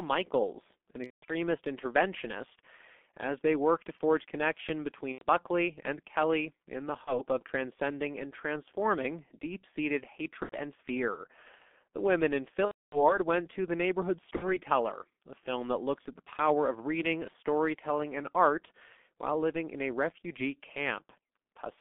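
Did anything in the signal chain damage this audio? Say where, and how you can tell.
Yes. G.723.1 codec throughout, at the codec stage: speech is confined to 200 Hz to 3.5 kHz and sounds muffled and hoarse, typical of its 6.3 kbit/s, 30 ms frames.

VoIP packet loss concealed by the speech codec, a network fault, at 1.04–1.33 s (before "interventionist as they work"), 5.13–5.25 s (after "work to forge connection"), 7.05–7.22 s, 10.43–10.55 s, 12.65–13.18 s and 14.36–14.57 s. The decoder stretches its last pitch and filter into a fading buzzy tone or coloured noise.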